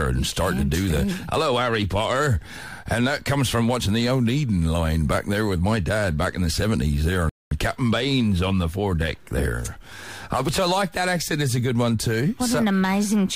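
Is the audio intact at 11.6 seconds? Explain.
Yes, at 11.6 seconds the audio is intact, with no dropout, click, distortion or other fault at that moment.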